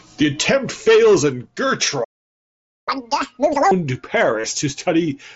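A playback stall hits this speech clip from 2.04 to 2.89 s, right after "attempt fails and": the output goes silent for about 0.83 s, most likely because the player's buffer ran dry or its audio thread was blocked, before sound resumes where it left off. Catch-up at higher speed follows from 2.89 to 3.71 s, as the player works through its backlog at 2.0 times normal speed by resampling, so the speech rushes and its pitch jumps roughly ten semitones before both fall back to normal. Concealed Bluetooth headset packet loss occurs from 4.41 to 4.44 s: about 30 ms of the headset's voice stream went missing, which fits a short run of around four lost frames, and the receiver bridged the gap by repeating the closest-matching recent waveform, leaving a brief buzzy hold and a slight warble as real audio returns. The mSBC wideband headset codec leaves its band limit near 8 kHz and a faint graininess on louder passages.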